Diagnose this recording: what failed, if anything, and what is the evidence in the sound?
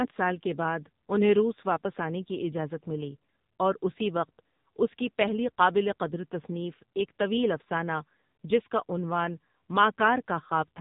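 The speech sounds thin, buzzy and synthetic for the whole clip, with nothing above about 3.8 kHz. This is an AMR narrowband mobile codec failure at the codec stage: AMR-NB rebuilds the voice from a vocal-tract model and sparse pulses, and this heavy damage points to a low mode near 6.7 kbps.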